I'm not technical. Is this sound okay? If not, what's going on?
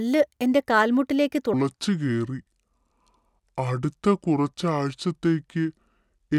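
No. From 1.54 s to the end, the speech plays as a section at the wrong speed: about 0.65 times normal, so it turns slow and much deeper, roughly seven semitones down. Pace and pitch drop together, which sets it apart from a pure pitch change. Likely cause: a playback clock mismatch.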